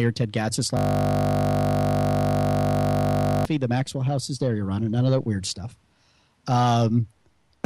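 A system hang loop from 0.77 to 3.45 s: the system froze while the hardware kept replaying a 20 ms buffer, producing a steady 50 Hz buzz.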